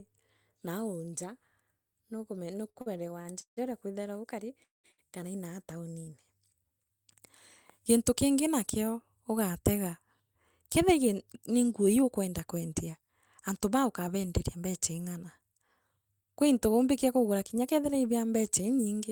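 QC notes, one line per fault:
2.69–3.59 s, repeated stalls (stutter): four gaps, longest 158 ms, hold the sound for 294 ms total. Late packets emptied the jitter buffer repeatedly. Nothing is lost, but the speech drags.
4.64–4.86 s, call audio freeze: a 200 ms gap fades to 160 ms of silence, then speech resumes where it stopped. Likely cause is packets held up in transit.
4.92–5.00 s, short stall from a late packet: one sound is stretched 63 ms with a slight buzz or dip while the receiver waits, then continues unchanged.
9.996–12.69 s, jitter buffer speed-up: speech runs at 109% speed with unchanged pitch. About 300 ms of pitch periods is trimmed to cut buffered delay, so it sounds hurried.
18.79–19.09 s, jitter buffer speed-up: a brief 112% rush at steady pitch, removing roughly 50 ms of short pieces to shrink the buffer.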